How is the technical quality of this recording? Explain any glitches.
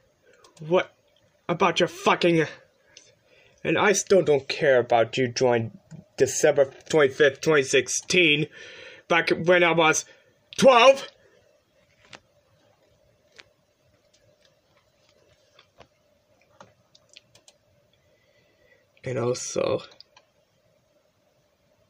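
The recording shows no audible technical glitches at any point.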